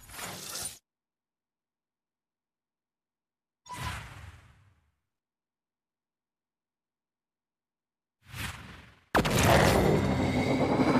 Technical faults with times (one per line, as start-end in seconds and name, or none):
8.72-9.29 drift correction step